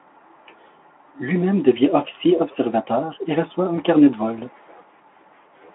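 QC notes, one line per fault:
3.75–3.80 s, VoIP packet loss concealed by the speech codec. The sound briefly smears into a buzzy tone or coloured noise that fades. This points to one lost 20 ms frame that the decoder filled by repeating its last pitch and filter at lower gain. The Speex telephone band stays 250 Hz to 3.4 kHz.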